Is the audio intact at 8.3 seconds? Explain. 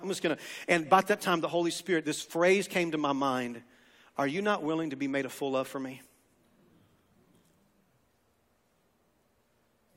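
Yes, the speech at 8.3 seconds is intact, with no dropout, glitch or other fault at that moment.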